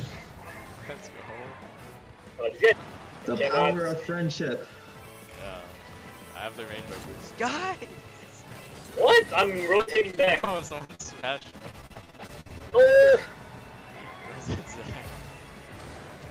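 From 9.77 to 12.88 s there is repeated packet loss, giving a robotic sound. Dozens of short holes arrive in quick succession, the longest about 53 ms. Each is patched by stretching the preceding sound. About a quarter of this stretch is filled this way, so it sounds choppy and robotic.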